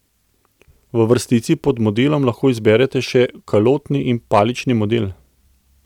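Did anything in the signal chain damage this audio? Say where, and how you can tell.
Yes: hard clipping from 4.34 to 4.41 s. Peaks about 4 dB over the limit of a converter or fixed-point stage are sliced flat, giving abrupt crackle rather than soft clipping's rounded fuzz.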